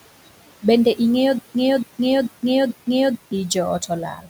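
From the start, noise suppressor artifacts run through the whole clip. The room noise, about 17 dB below the speech, is pulled down by about 18 dB in the pauses and swells back under speech. On a spectrogram the noise floor looks patchy, with dark gaps between words.

From 1.38 to 3.33 s there is a stutter with silent gaps. A 0.28 s fragment repeats four times, each followed by 0.16 s of dead silence, on an even 0.44 s cycle. The waveform shows identical blocks separated by near-flat stretches. The likely cause is a stalled player or stream replaying its last buffer on each retry, so the audio for that stretch is lost.

At 4.14 to 4.29 s, speech is cut by the noise suppressor. For around 150 ms part of the speech is treated as noise and drops by as much as about 11 dB, so it sounds swallowed. On the spectrogram the energy fades early, like background rather than speech.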